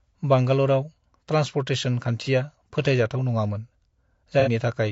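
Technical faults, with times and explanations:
throughout: rough, grainy speech with noise between harmonics and a dulled top band, likely from low-delay AAC compression, AAC-ELD at a bitrate around 32 kbps.
2.24–2.29 s and 4.40–4.49 s: AAC frame loss with concealment. Smeared, noisy patches right after "बांगालरआव ट्रान्सपर्टेसन" and again later, where the decoder patched about 30 ms and then about 60 ms from earlier spectrum.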